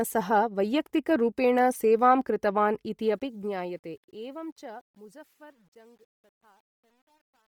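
Speech recorded through a link whose heavy, grainy coding throughout is likely Bluetooth LC3 compression. At the rate the sound points to, around 32 kbps with 10 ms frames, the encoder zeroes much of the upper spectrum and fills those bands with noise. The voice takes on a breathy, granular edge, though content reaches up to about 20.3 kHz. From 3.01 s to the end at 7.52 s, a gain stage applies the fade-out while keeping only 10 bits with no dither, causing truncation distortion on a fade. As the level drops toward the smallest step, the waveform collapses into a few coarse square steps. The tail turns gritty, worst from 4.41 s to 7.53 s, instead of thinning out cleanly.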